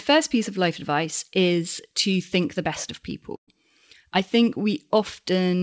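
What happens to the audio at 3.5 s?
Right after "think the best of", the sound smears into a held, fading continuation and then jumps ahead. This is a burst of packet loss from 3.36 to 3.49 s: about 120 ms never arrived, so the receiver stretched and faded the last audio before resuming later.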